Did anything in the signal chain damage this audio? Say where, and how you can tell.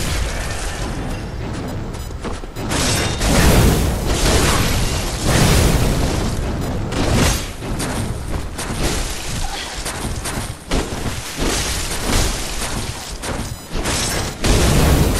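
Yes, computer activity noise is present throughout, entering at the analogue wiring through a shared ground. A buzzing chirp near 1 kHz, roughly 30 dB below the sound, follows processor or mouse load rather than the audio, showing as a thin, flickering horizontal line on a spectrogram.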